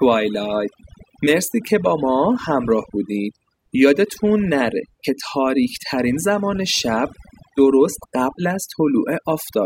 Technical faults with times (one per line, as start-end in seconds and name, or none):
0.00-9.65 overdone noise removal